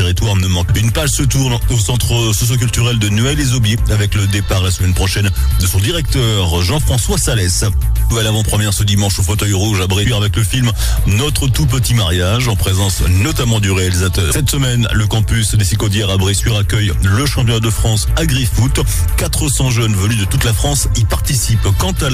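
The audio carries three short bursts of damaged data in a compressed stream. They fall at 0.68 s, from 8.11 to 8.13 s, and at 14.31 s. Each lasts only about 18 to 20 ms. Each is heard as a brief chirp, squawk, click or short hole that does not belong to the surrounding sound. The cause is corrupted bytes in the encoded stream. The decoder misreads those frames, loses its place and resynchronises at the next valid frame header.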